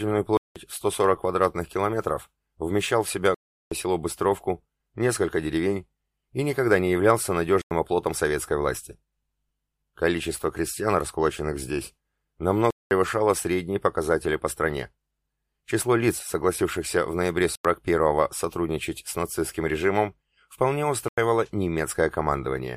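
The output buffer was likely repeatedly not filled in time, leaving blocks of digital silence at 0.37–0.56 s, 3.34–3.72 s, 7.62–7.71 s, 12.70–12.91 s, 17.55–17.65 s and 21.08–21.18 s. Lengths of 93, 186 and 372 ms fit 4096-, 8192- and 16384-sample buffers. Each cuts the sound out and back abruptly, leaving short holes.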